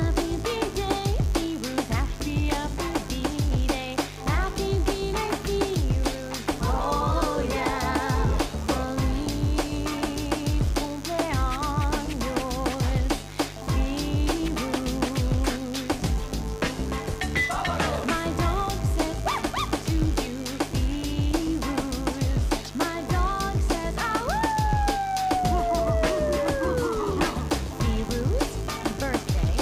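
Mains buzz runs through the whole recording. Interference from the 50 Hz supply, of the kind a dimmer, a rectifier or a missing shield lets in, has got into the signal path as sharp switching spikes, two in each mains cycle. Because the spikes are so abrupt, they carry a dense series of 50 Hz harmonics reaching into the kilohertz range. The result is a steady, raspy buzz sitting only about 15 dB below the wanted sound.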